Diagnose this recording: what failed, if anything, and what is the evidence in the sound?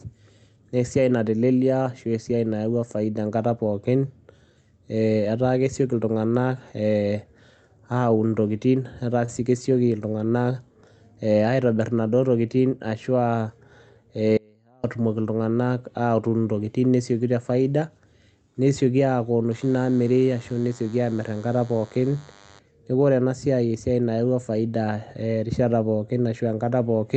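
At 9.25 to 9.31 s a sound is held about 25 ms too long with nothing lost: a short stall from a late packet, where the jitter buffer briefly ran empty.

From 13.37 to 13.59 s the speech runs hurried at unchanged pitch, about 116% speed. This is a jitter buffer speed-up that trimmed pitch periods to cut roughly 40 ms of delay.

At 14.37 s the speech cuts abruptly to a faint residue about 35 dB down for 0.46 s. This is an audio dropout, likely from a break upstream while the later path stayed live.

From 19.51 to 22.59 s a thin, harmonic-rich 100 Hz buzz sits about 30 dB below the speech. This is DECT cordless phone buzz: the analogue circuitry rectified radio bursts arriving every 10 ms.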